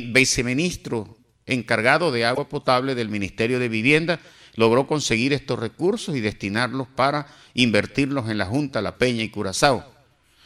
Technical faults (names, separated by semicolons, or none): broken MP3 bit reservoir